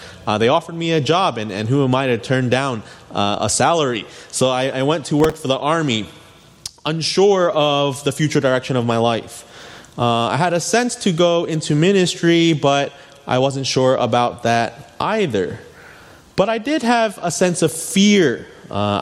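Two bursts of processor overload crackle tear through the audio, at 5.18 to 5.43 s and 17.69 to 17.92 s. The processor repeatedly missed its deadlines for very short buffers, around a millisecond and a half each. Stale audio replayed with hard edges, producing a gritty rasp.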